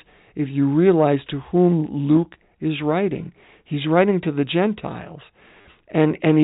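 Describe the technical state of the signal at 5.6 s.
At 5.57–5.65 s, packet loss with the last packet repeated: about 50 ms is lost, with a longest run of 40 ms, which fits 10 ms packets. Repeated segments cause a brief robotic buzz, visible as identical repeated waveform blocks.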